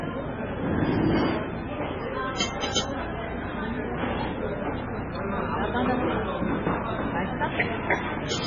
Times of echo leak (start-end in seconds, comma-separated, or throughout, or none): none